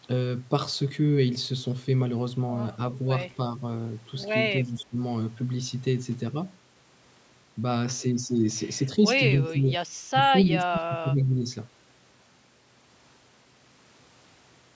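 The speech dips in level at 4.63–4.98 s, 9.36–9.79 s, 10.12–10.22 s and 10.49–11.46 s, with the last and longest dip going deepest, around 20 dB. This is speech suppressed in double talk, likely an echo canceller mistaking the talker for loudspeaker echo and attenuating both.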